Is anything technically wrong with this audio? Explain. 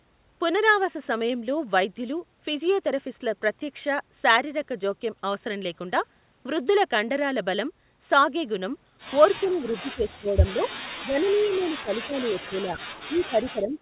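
Yes. There are two problems, both typical of a speakerphone call where both ends talk at once.

Speech suppressed in double talk occurs from 9.41 to 10.61 s, from 11.01 to 12.78 s, and from 13.07 s to the end. The speech sinks by up to about 20 dB and turns patchy, with pieces ducked away. The likely cause is an echo canceller that couldn't tell this talker from the far side's loudspeaker echo, so it turned everything down. Packet-loss dropouts are short and abrupt. These dips are longer and ragged.

An echo leak appears from 11.27 to 11.65 s, inside the second suppressed stretch. A faint copy of the speech, about 30 dB down, trails the original by 362 ms. This is likely residual echo that the canceller failed to remove and sent back. The fixed delay of over a third of a second and the distinct, separate repeat set it apart from room reverberation, which smears continuously right behind the sound.

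The band stops at 4 kHz, which fits a narrowband call codec.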